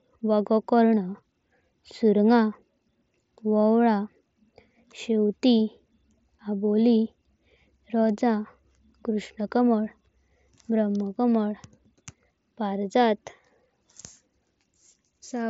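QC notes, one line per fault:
Nothing stood out on listening to this speech recording.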